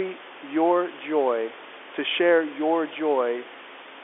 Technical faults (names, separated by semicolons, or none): none